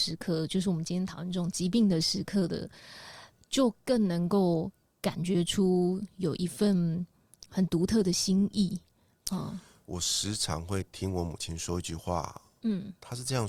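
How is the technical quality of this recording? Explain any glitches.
No glitches or faults are audible.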